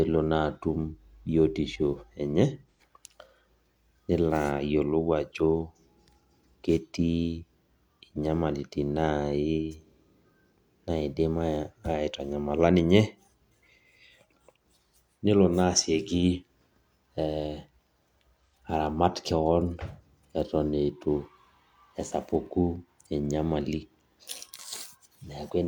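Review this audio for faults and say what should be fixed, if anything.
AAC frame loss with concealment occurs twice: from 2.71 to 2.80 s, right after "biotisho enye", and from 18.46 to 18.54 s, just before "aramat keon". Each gap lasts about 85 ms, which fits two dropped AAC frames. The decoder rebuilt the missing audio from the last good spectrum, so each spot sounds like a brief smeared, noisy patch in the speech rather than a dropout. To prevent this, protect the AAC stream against packet loss with forward error correction or retransmission and a deeper jitter buffer.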